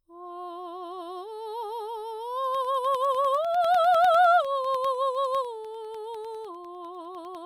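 Periodic USB or driver dropouts run from 2.45 s to 7.35 s, recurring every 0.1 s for roughly fifty events across the music. At each one, something stalls the USB link or audio driver and a tiny fraction of a millisecond of signal goes missing, replaced by silence. Those brief gaps break the waveform abruptly, so the music picks up a steady ten-per-second ticking, like a clock riding on the sound.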